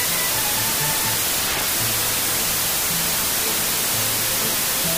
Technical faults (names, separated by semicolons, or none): wrong sample width